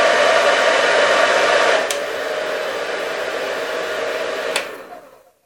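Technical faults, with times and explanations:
Nothing technical to flag here; the sounds come across without any faults worth noting.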